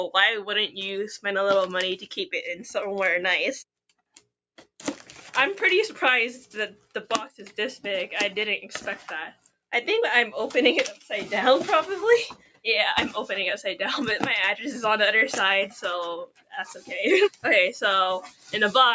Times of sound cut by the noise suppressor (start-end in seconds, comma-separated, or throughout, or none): 12.37-12.65, 16.27-16.91, 18.23-18.53